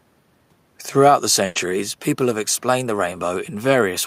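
At 1.45 s a burst of packet loss leaves about 100 ms concealed: the last sound is stretched and faded rather than cut to silence, then the speech resumes with that stretch missing.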